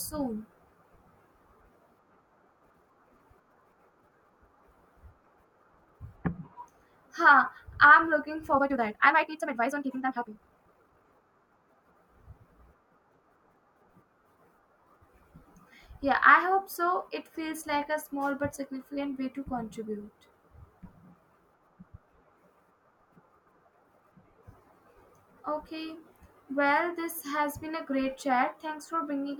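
From 8.49 to 11.05 s the speech jumps into a time-stretched section. The pace suddenly runs about 1.87 times faster while the pitch holds steady, so it sounds rushed. This is likely software squeezing the audio by dropping short pieces.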